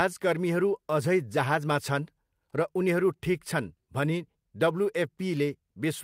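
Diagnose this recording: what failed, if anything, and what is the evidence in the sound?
Nothing in the speech stood out as a fault on listening.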